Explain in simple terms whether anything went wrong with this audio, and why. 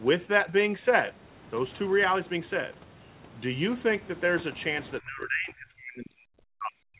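From about 4.99 s to the end, the speech suddenly sinks and almost vanishes. This is likely speech suppressed in double talk: both sides spoke at once, and the echo canceller, unable to separate this talker from the loudspeaker echo, turned everything down.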